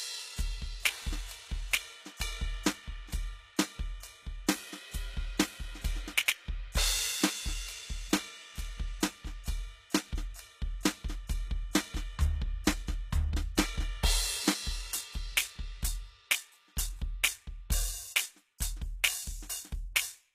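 Music with plainly audible codec damage throughout and nothing above 14.9 kHz. The treble sounds synthetic, likely from HE-AAC compression at a low bitrate around 20 kbps, which rebuilds the top band from copied lower bands. At 18.6 s an attack is preceded by about 19 ms of hiss. This is pre-echo, where the codec's quantisation noise is spread across the block ahead of the transient.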